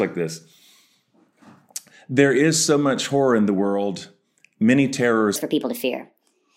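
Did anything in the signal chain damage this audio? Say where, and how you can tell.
Yes. A section at the wrong speed runs from 5.36 s to the end of the clip at 6.56 s. There the speech suddenly turns hurried and high, running 1.47 times faster, with pitch raised by about seven semitones because speed and pitch shift together. The damage most likely happened at the playback or editing stage, where this final segment was clocked at the wrong rate, compressing its timing and lifting every frequency in proportion.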